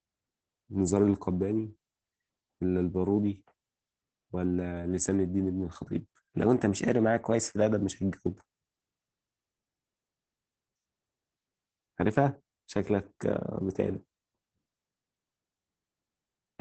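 Throughout the whole clip, the speech has been squeezed through Opus voice compression running in its SILK linear-prediction mode at a very low rate. The damage fits a bitrate around 10 kbps with 20 ms frames. The coder has narrowed the band to wideband, so nothing survives above about 8.6 kHz, and it codes the excitation coarsely. As a result, the speech sounds muffled and hoarse, with a slightly robotic edge.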